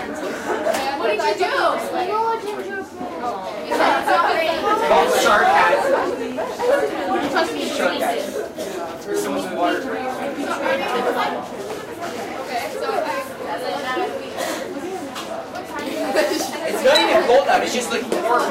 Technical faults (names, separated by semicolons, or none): train of clicks